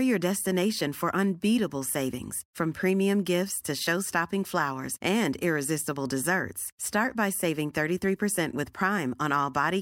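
Speech recording with no technical faults to report. Nothing in the signal calls for a time or a cause.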